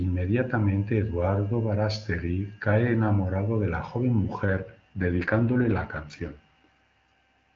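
From 4.46 s to the end, the speech turns rougher and more synthetic, with a raspy edge, though the bandwidth holds steady and nothing drops out. This is an AMR rate drop: the wideband AMR codec, clean at what sounds like its top 23.85 kbit/s mode beforehand, is switched mid-call to a much lower mode, likely around 8.85 kbit/s, leaving fewer bits to model the voice and giving the extra over to error protection.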